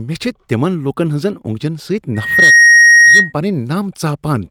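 Loudspeaker feedback squeal runs from 2.15 to 3.33 s. The microphone picks up its own loudspeaker, and at 1.9 kHz the loop gain exceeds one, so a pure tone swells within about a third of a second to roughly 10 dB above the speech.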